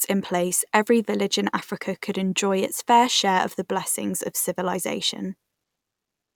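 A speech recording, and nothing is technically wrong with it.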